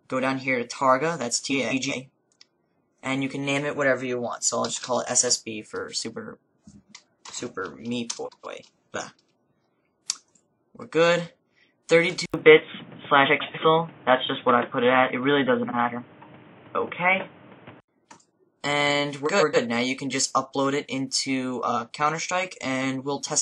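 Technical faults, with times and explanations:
1.52 to 19.56 s, frames out of order: at 1.52 to 1.92 s, 8.25 to 8.65 s, 13.26 to 13.58 s, 15.64 to 15.75 s and 19.25 to 19.56 s, two adjacent runs of frames arrived swapped and were decoded in that order. The blocks are about 186 ms, 139 ms and 46 ms long, which fits four, three and one frame per side. Each stretch plays with its halves exchanged, giving a garbled flutter, though no time is lost.
12.26 to 17.88 s, input switched to a poorer device: the capture most likely moved to a different, lower-grade microphone or headset path. There is a gap of about 80 ms at the change. Nothing above 3.7 kHz survives, so the sound turns dull and boxy. The level shifts by roughly 5 dB, and a new noise floor sits roughly 30 dB under the signal. Full bandwidth returns at 17.88 s.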